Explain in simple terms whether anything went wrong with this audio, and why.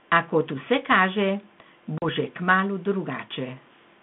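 Around 1.98 to 2.06 s there's packet loss on an ADPCM call. A couple of packets, about 40 ms of speech, drop out into silence. Right after, the decoder has lost track of its predictions, so the speech comes back slightly off before it settles.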